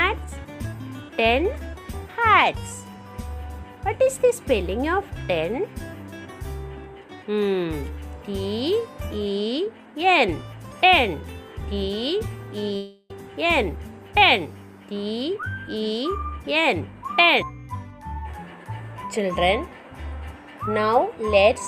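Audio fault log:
12.76–13.11 s, long network dropout: for about a third of a second the real audio stops and what you hear instead is the last bit of sound being stretched out into a buzzy, fading hiss that covers nearly the whole gap, with no dead silence. That's the likely cause: a run of packets never showed up, so the receiver invented filler until real audio resumed at 13.11 s, with roughly 340 ms of the original simply gone.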